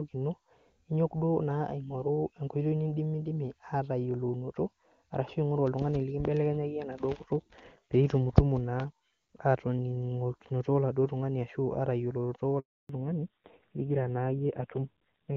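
At 12.59 s there is a handover gap. The call switched networks, and no speech frames arrived during the move. The sound fades out within a few tens of milliseconds. Then there is silence for about 300 ms, until 12.89 s, when the new link picks up. Whatever was said in that window is simply gone. Nothing is smeared or repeated. The stream just stops and restarts.

From 12.89 s to the end, the call shows a fallback to narrowband. Before the gap, the speech carries the open, airy top of HD Voice, with AMR-WB sounding clean at a high rate. After it, everything above 4 kHz is missing. Sibilants lose their edge, and the speech turns dull and boxy. It also turns rough and buzzy, which points to AMR-NB at one of its lower rates, around 5.9 kbit/s.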